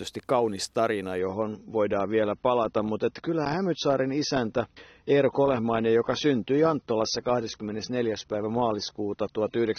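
Right at 1.19 s the speech drops to a lower-quality version of an adaptive stream and stays there until the clip ends at about 10 s. The player likely switched down because the connection slowed. The switch is abrupt, with no gap, and everything above 6.3 kHz vanishes, so the top end goes dull. It sounds like a fall from a decent AAC rate to something near 24 kbit/s.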